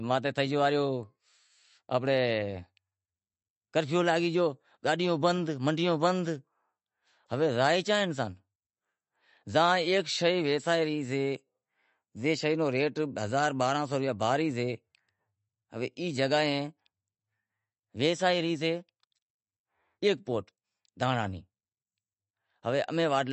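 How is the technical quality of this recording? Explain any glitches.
The quality's fairly rough, and it's down to one fault that runs through the whole recording. It sounds like MP3 compression, with the damage plainly audible. The treble stops dead at about 8.1 kHz, so s sounds lose their edge and come out a bit metallic. The rest has a watery, swirly texture, most likely from an encoder starved of bits, which fits a low bitrate around 40 kbps. With so little to spend, it chops off the top band and keeps switching weaker frequency detail on and off from frame to frame.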